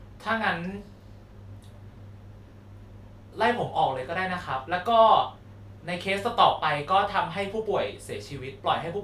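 No technical faults are audible anywhere in the speech.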